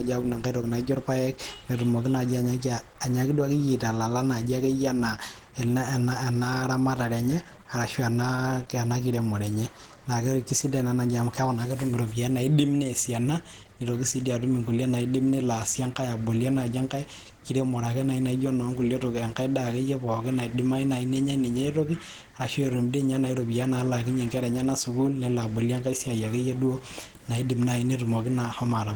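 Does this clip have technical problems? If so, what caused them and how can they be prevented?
Yes. The whole clip carries plainly audible Opus compression damage, likely from encoding at a very low rate in the codec's hybrid mode. The speech has a hoarse, grainy, muffled quality, because at this rate the encoder codes the lower band as speech and roughly fills in the upper bands instead of coding them in detail. The content still reaches about 20.2 kHz, and the roughness fits a bitrate around 16 kbps. To prevent it, encode at a higher Opus bitrate, say 32 kbps or more for speech, or keep a lossless copy for editing.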